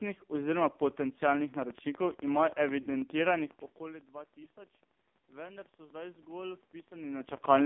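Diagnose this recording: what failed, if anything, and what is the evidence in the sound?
Codec stage: heavy AMR narrowband mobile codec damage at about 5.9 kbps gives buzzy, synthetic speech; the spectrogram shows a band from 200 Hz to 3.6 kHz with nothing above.

Train of clicks from 1.54 to 7.63 s: regular ticks about 12 per second, peaking about 5 dB above the speech. They appear as thin vertical spikes, likely from interference or a faulty connection or power supply.

Network stage: lost AMR speech frames at 2.82 to 2.89 s (40 ms) and 4.44 to 4.47 s (20 ms). The decoder stretched and faded the last frame, leaving brief dips in the waveform.

Call processing: automatic gain rising from 5.29 to 7.38 s. Speech and background swell together by about 5 dB, and the waveform envelope climbs gradually.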